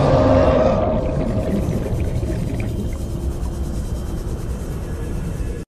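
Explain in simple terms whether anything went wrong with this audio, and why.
Nothing went wrong here; the audio runs from beginning to end without anything jumping out as a problem.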